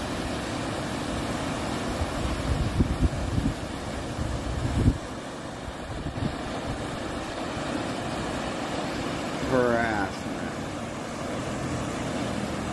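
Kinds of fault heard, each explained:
Nothing in the way of a technical fault stands out anywhere in this one.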